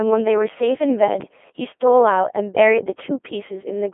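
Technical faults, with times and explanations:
Throughout, Codec 2 vocoder: the speech is resynthesised from pitch, voicing and envelope data rather than the real waveform, sounding buzzy and robotic, as at 2.4 kbit/s. A spectrogram shows tidy harmonics within 250 Hz to 3.4 kHz, empty above 3.7 kHz.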